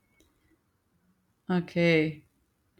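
No technical faults can be heard anywhere in the recording; the speech signal stays continuous and intact from its first moment to its last.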